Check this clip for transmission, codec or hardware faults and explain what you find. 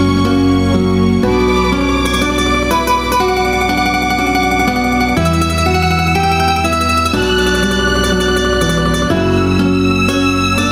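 One fault is present: gain pumping, running through the whole clip. The gain swings by about 5 dB. The cause is likely input gain set far too high, with a fast compressor or limiter clamping down on each peak and then releasing. Unlike a noise gate, the background never cuts to silence. Unlike clipping, the peaks are squashed flat in level rather than distorted.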